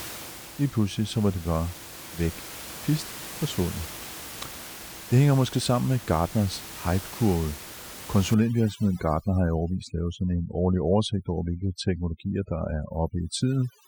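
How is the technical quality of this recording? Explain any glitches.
The recording is marred by one glitch, overdone noise removal, running from 8.34 s to the end at 13.87 s. Over that stretch the background drops and breaks up into twinkling specks. Room noise, sitting about 16 dB below the speech, is what gets attacked: a noise reduction stage set far too aggressively shuts off individual frequency bands whenever they approach its noise estimate, dragging the quieter parts of the speech down with them.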